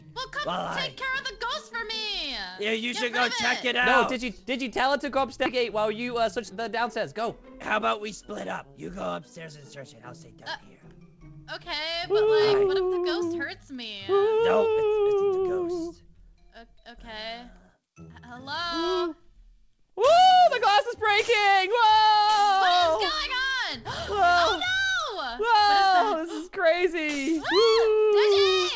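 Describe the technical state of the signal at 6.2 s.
At 6.2 s the receiver's jitter buffer held more audio than its target, so a jitter buffer speed-up from 6.07 to 6.51 s removed short pitch-period slices, roughly 50 ms in total. The sound plays about 11% faster at the same pitch and feels briefly hurried.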